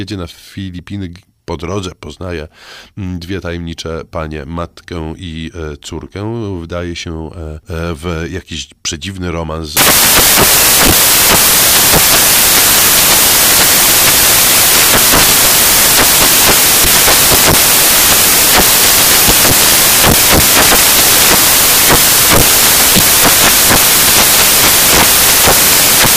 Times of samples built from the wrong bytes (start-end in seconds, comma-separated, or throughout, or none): 9.77-26.16